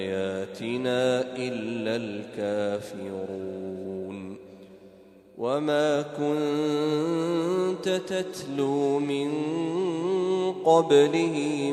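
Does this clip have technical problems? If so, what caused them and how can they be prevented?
No, there are no audible faults in the recording chain here, so no fix is needed.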